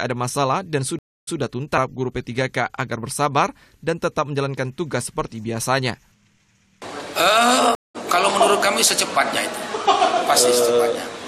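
The sound drops out for 284 ms at 0.99 s, then resumes repeating 116 ms already heard; at 7.75 s a 195 ms gap returns with about a tenth of a second skipped. Each is a stream reconnect, where the player restarts its decoder mid-stream.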